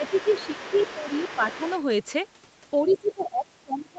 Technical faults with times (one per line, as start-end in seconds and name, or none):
0.00-0.58 speech suppressed in double talk
0.04-1.82 other side's voice leaking through
1.02-1.60 speech suppressed in double talk
2.81-3.99 speech suppressed in double talk
2.89-3.23 other side's voice leaking through